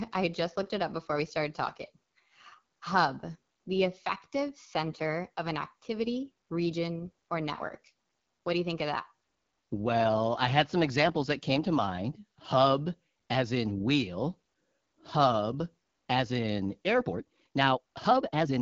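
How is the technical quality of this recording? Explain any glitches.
The recording has clear technical faults. Codec damage runs through the whole clip, and the final stretch is audibly sped up.

The first fault is the AMR wideband (HD Voice) codec, present throughout. Nothing is heard above about 7 kHz. The codec models speech with a pulse-driven vocal tract filter up to 6.4 kHz. It fills the band above that with shaped noise. The damage is plainly audible. The speech sounds rough and raspy, which fits one of the codec's lowest rates, around 8.85 kbit/s.

The second fault is a time-stretched section from 17.0 s to the end, at 18.6 s. It starts right after "hub as in". The pace jumps to about 1.85 times normal, but the pitch does not rise. This is likely stretching software that squeezes the audio by dropping short pieces while keeping pitch intact. The result sounds rushed.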